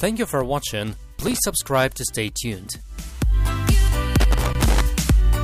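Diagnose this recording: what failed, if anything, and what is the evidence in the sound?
Loose connector crackle at 1.21 to 1.39 s and again at 4.20 to 4.81 s points to a failure in the analogue wiring. Each stretch is an irregular burst of crackle and scratching, the second lasting about 0.6 s. A worn or dirty contact is intermittently making and breaking as it shifts, chopping the signal on and off, and any DC present on the line turns each break into an added pop.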